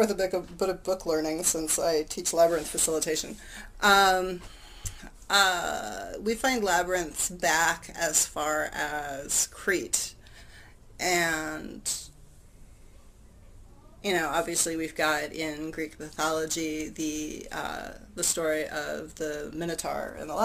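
No technical faults are audible.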